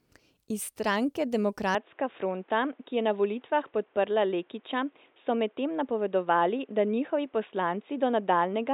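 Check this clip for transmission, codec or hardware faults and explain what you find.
From 1.75 s to the end, the speech turns dull and boxy, losing everything above 3.8 kHz and picking up a faint new background noise, with no gap or level jump. The likely cause is the input switched to a poorer, narrower-band device.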